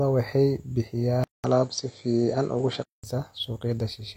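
At 1.24 s the input likely switched to a poorer device, leaving a 0.2 s silence at the change, and switched back at 3.04 s. In between, the speech loses everything above 8 kHz and turns dull, its level shifts by a few decibels, and a faint new background noise appears.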